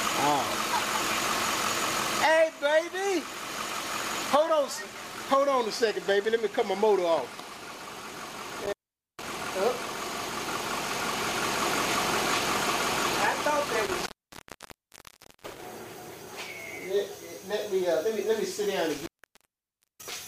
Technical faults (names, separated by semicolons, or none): intermittent contact